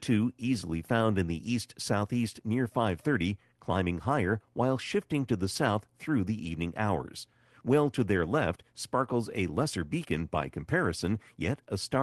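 No technical fault can be heard in this speech recording. It has come through a WebRTC call path, with the top of the spectrum ending around 12 kHz, which points to a call codec running at a modest bitrate.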